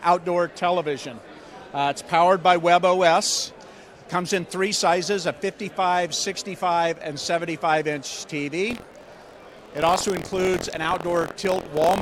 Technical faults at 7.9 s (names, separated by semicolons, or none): none